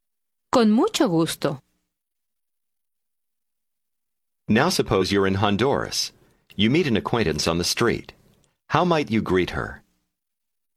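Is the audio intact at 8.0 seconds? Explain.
Yes, at 8.0 seconds the speech plays through intact, with no dropout, click, distortion or other fault at that moment.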